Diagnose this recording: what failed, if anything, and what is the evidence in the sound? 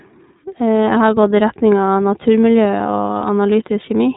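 Across the whole clip the speech sounds narrow, slightly rough and synthetic, with clear damage and nothing above about 3.8 kHz. This is iLBC codec coloration at the codec stage. iLBC codes each 30 ms frame's excitation on its own, without drawing on the previous frame, and at this low bitrate a grainy, artificial texture remains. The band limit and the degree of roughness fit iLBC's 13.33 kbps mode.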